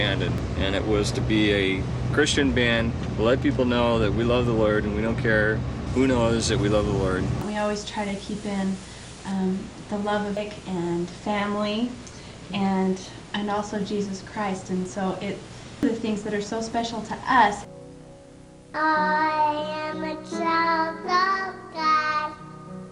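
At 0.38 s, 10.37 s and 15.83 s the audio jumps forward as compressed frames are skipped, losing roughly 0.4, 0.5 and 0.7 s. The steps fit whole frames of about 85 ms. From 5.87 to 9.32 s, pre-emphasis was left on: the treble boost was never undone, lifting 10 kHz about 8 dB over 1 kHz along a smooth shelving curve. The result is bright, thin and sibilant, with no missing time.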